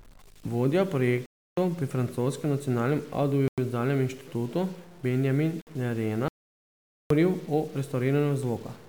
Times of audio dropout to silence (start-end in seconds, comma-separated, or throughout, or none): 6.28-7.10